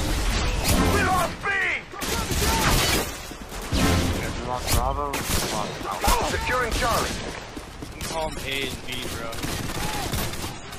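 No technical faults can be heard anywhere in this audio. There is no point in the recording that needs a timestamp or any repair.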